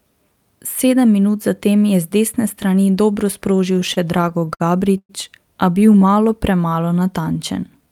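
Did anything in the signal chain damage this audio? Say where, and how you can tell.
Yes, on the network side. Repeated stalls (stutter) after "z desne strani dobro", 3.73–4.62 s, with eleven short holds up to 56 ms, then six more at 5.79–6.17 s. Late packets kept draining the jitter buffer.

There's a call audio freeze at 4.98–5.11 s. The last sound hangs and fades, going silent for about 60 ms, likely from packets held up in transit, pushing everything 114 ms later.

Jitter buffer slow-down from 6.26 s to the end. The receiver repeats pitch periods to rebuild its reserve, adding 190 ms, so the audio drags at 89% speed without a pitch drop.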